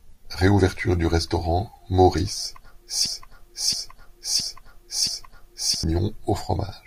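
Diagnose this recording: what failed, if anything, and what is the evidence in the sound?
A broken-record loop runs from 3.06 to 5.84 s. A 0.67 s piece of speech repeats exactly, four times. A playback or stream buffer likely stalled and replayed its last fragment, losing the audio in between.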